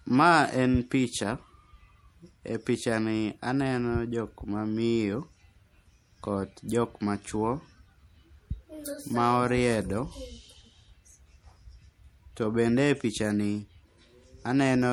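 From start to finish, the speech has likely been through MP3 compression at a low rate, which fits a bitrate of around 64 kbps. With too few bits to go around, the encoder drops quieter frequency detail and lets weaker components flicker in and out between frames. The damage is plainly audible as a watery, swirling texture over the whole clip, with smeared onsets, and nothing is present above 20.8 kHz.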